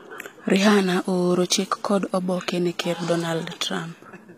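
It's a short speech recording with plainly audible HE-AAC compression damage throughout. The s sounds come out gritty and metallic, and nothing reaches past 15.5 kHz. That's likely spectral band replication faking the treble from copied lower bands, which fits a low bitrate around 24 kbps.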